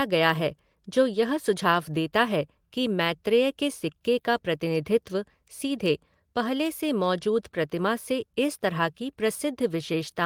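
No technical faults are audible anywhere in the speech.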